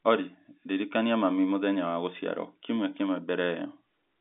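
No technical faults can be heard in this speech.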